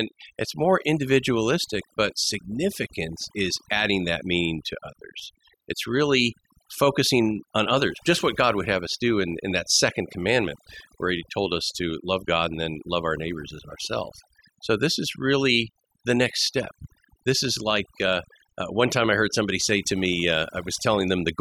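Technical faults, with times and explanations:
Throughout: overdone noise removal. A noise reducer set too strong mutes frequency bands near the noise estimate, leaving a lowered background that breaks up into twinkling specks.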